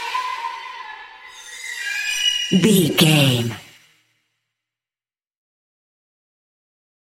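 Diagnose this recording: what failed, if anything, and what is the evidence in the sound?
Zipper noise from a gain change applied in coarse steps at the driver or buffer stage: between 3.29 and 4.05 s the level drops by roughly 15 dB in 2 dB jumps, around fifteen a second. Each jump is an instant discontinuity, so a ticking rides on the sound until the level settles. Unlike a smooth fader move, which glides with no artefacts, this fade is audibly quantised, its ticks matching the step rate rather than being random clicks.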